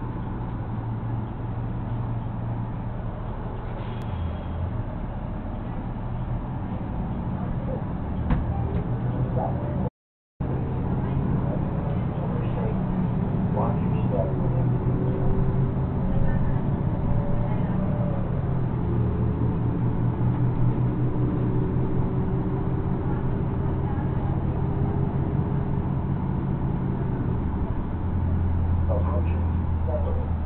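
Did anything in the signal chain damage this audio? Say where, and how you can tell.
Yes. There is an audio dropout to silence from 9.89 s to 10.40 s. The sound stops abruptly and returns just as abruptly, with about half a second lost. The gap is silent, with no room tone left, so the recorder kept writing silence while receiving nothing. That points to the input stage rather than the source. The likely cause is a brief loss of the input link, such as a disconnected device or a momentary mute. Whatever sounded in that half second is gone.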